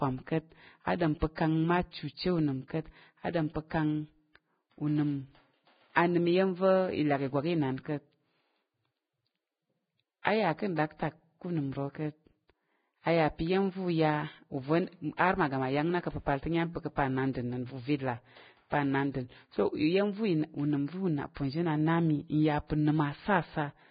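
Throughout, the speech is hissy and grainy, with nothing above 4.9 kHz. This is likely heavy Vorbis compression, fitting a bitrate near 15 kbps. The treble is quantised so coarsely that fine detail turns into noise. Tones sound rough and attacks blur.

Pre-echo appears at 0.98 to 1.01 s, 1.35 to 1.38 s, 5.94 s and 15.17 to 15.19 s. Each spreads about 19 to 24 ms. Codec noise from a loud attack leaks backward into the quiet before it. A brief hiss precedes the onset, which sounds smeared.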